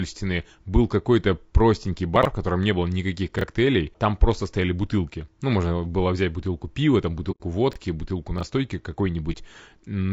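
Throughout, the speech sounds rough and grainy, likely from low-delay AAC compression at a low bitrate, which fits AAC-ELD around 32 kbps. On a spectrogram, noise fills the gaps between the pitch harmonics and the top band looks smeared and synthetic.

From 2.16 to 2.25 s, chunks out of order produce a jumbled moment. A segment plays three places late, with chunks of about 23 ms. The waveform shows hard discontinuities at each join.

The same fault returns at 3.39 to 3.44 s, with a single chunk swapped, as a short jumbled moment.

At 7.31 to 7.41 s, AAC frame loss with muting leaves a soft-edged hole of about 90 ms, which fits roughly three lost frames. The decoder zeroed those frames, so the overlapping windows fade the sound out and back in. This shows as a tapered dip in the waveform and a blank vertical band on the spectrogram.

Chunks out of order recur at 7.71 to 7.76 s and 8.38 to 8.43 s, each one chunk late, heard as brief jumbles.

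A second muted gap of about 30 ms at 9.32 to 9.37 s fits one lost frame.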